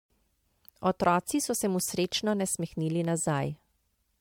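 Generation loss runs through the whole speech clip: swirly, hollow smearing and blurred consonant attacks, worse than one MP3 pass near 100 kbit/s would give. Unlike plain low bitrate, the band still reaches 20 kHz. The likely cause is about seven re-encodes stacking artefacts on shifting frame grids.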